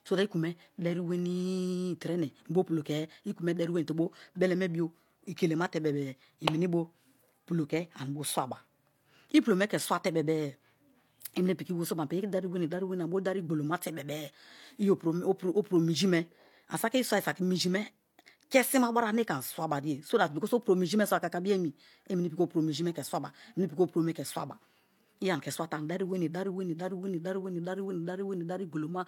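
Throughout the whole speech recording, the audio sounds like low-bitrate audio saved at a high bitrate. The current MP3 is likely a 256 kbit/s re-encode of an earlier encode, and the sound points to something like HE-AAC at around 40 kbit/s. Nothing is present above 18.5 kHz. The thin, processed character of the first low-bitrate encode remains. Unlike a file that is simply encoded at a low bitrate, this one carries a generous bitrate that restores none of the lost detail.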